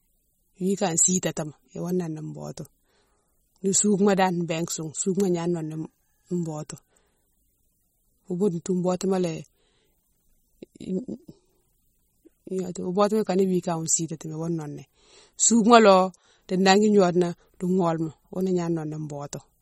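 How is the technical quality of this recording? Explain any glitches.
The speech is clearly damaged by heavy lossy coding, audible the whole way through. The damage sounds like MP3 compression, likely at a very low bitrate, which fits around 32 kbps. Short on bits, the encoder drops weak frequency lines that flicker between frames, giving a watery, swirly texture and smeared consonants, and nothing survives above 15.9 kHz.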